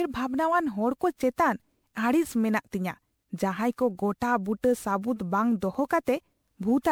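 From start to finish the speech carries generation loss: it sounds swirly, smeared and hollow, and consonant attacks are blurred. The likely cause is repeated decoding and re-encoding, around ten passes, through a lossy codec whose character fits MP3 at 128 kbit/s. Each pass quantised on a shifted frame grid, so the damage accumulated. On a spectrogram, content stops at 20.8 kHz, with fluttering holes and blotchy noise throughout, while onsets in the waveform look softened and smeared.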